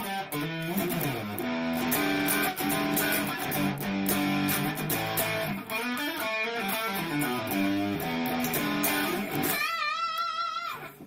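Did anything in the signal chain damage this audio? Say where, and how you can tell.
No, nothing in the signal chain damaged this audio.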